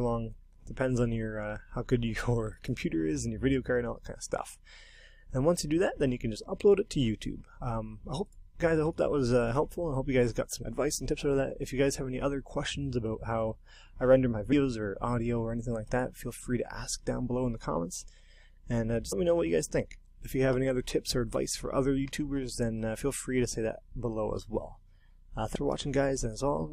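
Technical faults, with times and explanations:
10.61, 14.51, 19.11 and 25.54 s: damaged data in a compressed stream. Corrupt frames are misdecoded into brief blips, seen as thin broadband vertical streaks and abrupt waveform breaks.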